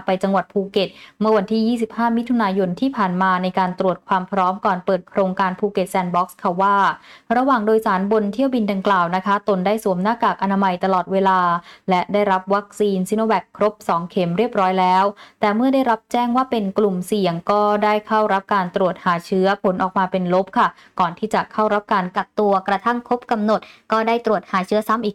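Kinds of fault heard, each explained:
Wrong sample rate: from 22.17 to 25.02 s the audio plays about 1.09 times too fast and roughly one and a half semitones sharp, which fits material recorded at 44.1 kHz being clocked out at 48 kHz. Speed and pitch rise together, unlike a pitch shift or time stretch, which moves only one.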